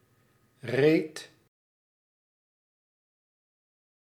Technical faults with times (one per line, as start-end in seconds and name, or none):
none